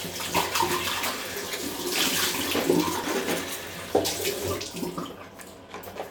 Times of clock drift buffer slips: 1.51-6.10

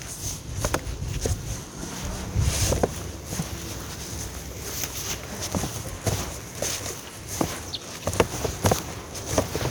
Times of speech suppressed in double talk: none

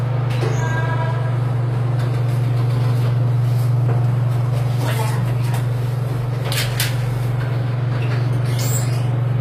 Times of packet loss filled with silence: none

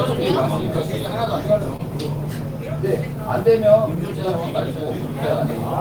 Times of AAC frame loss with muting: none

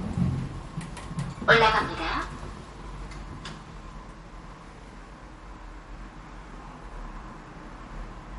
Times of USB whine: none

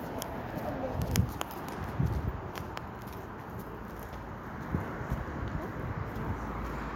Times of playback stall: none

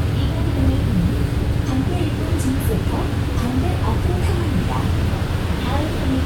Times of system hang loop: none

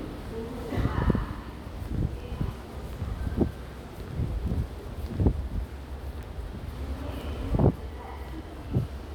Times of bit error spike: 4.48, 6.23, 7.21

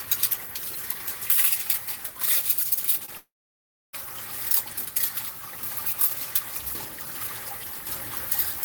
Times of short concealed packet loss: 3.05-3.09

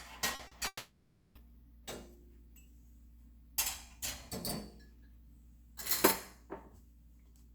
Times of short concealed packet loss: 0.35-0.53

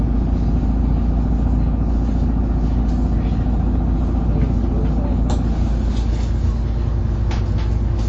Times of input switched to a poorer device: none

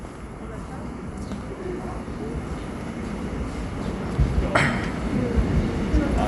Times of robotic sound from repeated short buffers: none

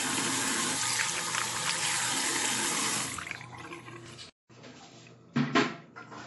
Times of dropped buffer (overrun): 0.48, 1.55, 2.65, 4.06, 4.92

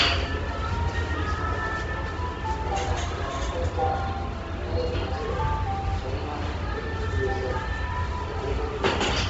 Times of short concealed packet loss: none

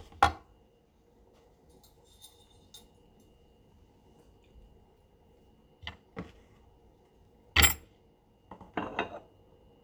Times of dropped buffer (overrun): none

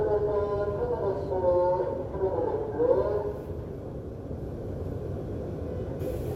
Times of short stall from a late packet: none

